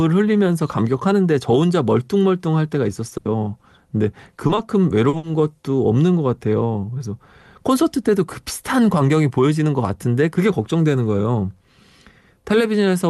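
At 3.09 to 3.13 s there's a short concealed packet loss: about 20 ms never arrived, so the receiver stretched the preceding sound to cover it, giving a quick smear. Right after, 3.17 to 3.27 s is a burst of packet loss. Roughly 80 ms went missing, the fill fades out as a held buzz or hiss, and the speech picks up further along with that chunk gone. More short concealed losses follow at 4.47 to 4.51 s and 4.55 to 4.59 s, each a tiny wobble, then a 40 ms one at 5.09 to 5.15 s. A second burst at 5.17 to 5.25 s drops about 60 ms the same fading way. Underneath, the call codec's band limit sits around 12 kHz.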